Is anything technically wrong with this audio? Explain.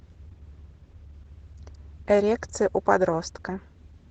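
Yes. Opus voice compression runs throughout. The band stops near 8 kHz, fitting wideband SILK coding. The coarse excitation suggests roughly 12 kbps. The speech sounds plainly muffled, hoarse and faintly robotic.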